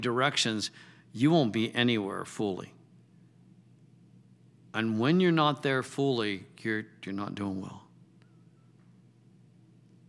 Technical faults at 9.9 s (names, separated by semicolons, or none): none